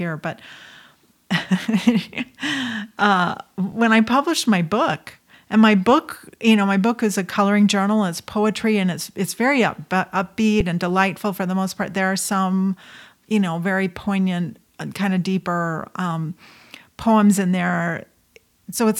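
At 3.72 s and again at 10.60 s the speech briefly freezes: an underrun with held sample. The output buffer emptied and the converter held its last value, so the waveform sits flat for 2.67 ms, then 5.33 ms, which fits gaps of 128 and 256 samples. Unlike a dropout to silence, there is little or no snap at onset. Nothing is skipped, so the speech resumes where it stopped with only a soft edge.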